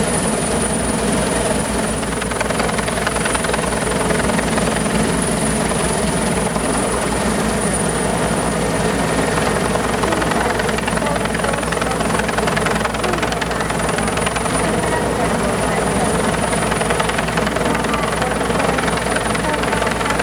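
From 0.52 s to the end, a buzz at 60 Hz with hash above it, only about 10 dB below the signal: video or display buzz from a screen or video cable coupling in.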